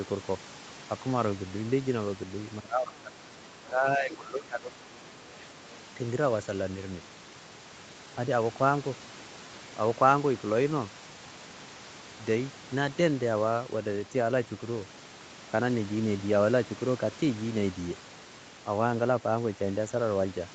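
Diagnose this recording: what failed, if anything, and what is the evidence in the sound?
Speech suppressed in double talk, 2.6–3.17 s and 3.54–4.88 s: speech drops about 15 dB, likely the call echo canceller muting near-end speech amid far-end echo.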